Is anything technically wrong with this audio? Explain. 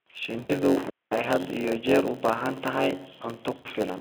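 Yes. A block size mismatch (padded) runs through the whole speech clip. One stage hands over blocks shorter than the next reads, and zeros fill each remainder. The result is a steady 91.9 Hz buzz and playback at 0.919 times normal speed with timbre unchanged. A plain resampling error would shift pitch along with speed.

VoIP packet loss concealed by the speech codec happens twice: from 0.38 to 0.58 s, a gap of about 100 ms, and from 3.57 to 3.68 s, about 80 ms, right after "jeer u baahan tahay". The lost stretches sound like roughly five and four 20 ms frames. The decoder extends its last pitch and filter with falling gain, so the sound becomes a fading buzzy smear instead of silence. The weakness lingers briefly after the packets return, which a clean dropout would not do. Both faults sit on top of light, band-limited Speex coding.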